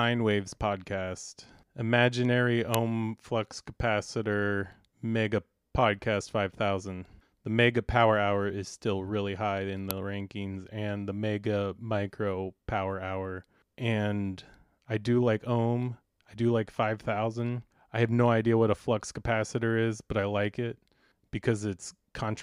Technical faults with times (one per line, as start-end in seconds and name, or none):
2.74 uninitialised buffer
9.91 uninitialised buffer